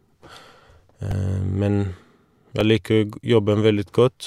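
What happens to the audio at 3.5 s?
Nothing goes wrong at 3.5 s; the speech plays through that moment intact, with no dropout, click or distortion.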